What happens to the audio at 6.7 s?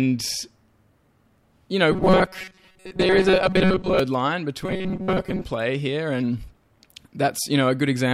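Nothing goes wrong at 6.7 s; the speech carries on intact through that moment, with no dropout, click, distortion or other audible fault.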